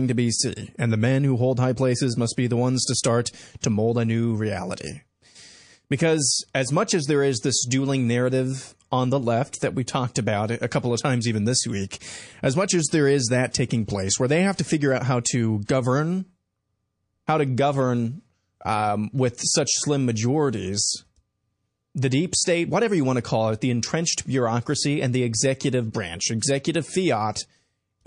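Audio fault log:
throughout: MP3 compression, likely at a low bitrate around 40 kbps. The damage is plainly audible: weak detail swirls in and out frame by frame. That steady watery texture across the whole clip sets it apart from isolated bursts.
3.61, 13.51, 13.86, 14.56, 15.65, 26.39 s: pre-echo. A hiss rises about 10 to 19 dB for 22 to 32 ms just before sharp onsets, such as between "the ones to start" and "to mold a new", or after "figure out how to". Coding noise from each attack spreads backward across a block of roughly 50 ms, which suggests the encoder never switched to short blocks. Unlike a click or reverb, it comes before the attack, not after.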